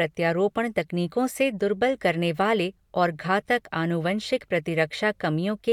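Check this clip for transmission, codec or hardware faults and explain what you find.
Nothing stood out on listening to this speech recording.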